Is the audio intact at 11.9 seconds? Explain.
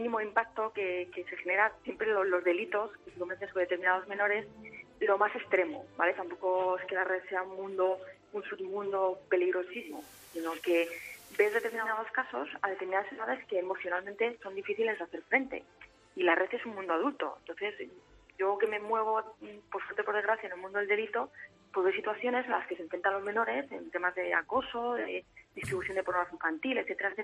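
No. From 9.69 to 12.03 s the receiver is in digital radio blending to analogue: it loses the digital stream and cross-fades over about 0.42 s to the station's FM broadcast, then back. At 11.9 s the FM signal is playing, with a hiss floor roughly 25 dB below the programme and the level about 1 dB different. On a spectrogram this shows as a raised broadband noise floor across the span, and the waveform steps slightly in level.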